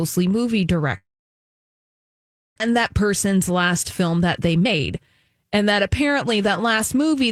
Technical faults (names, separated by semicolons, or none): long network dropout; jitter buffer speed-up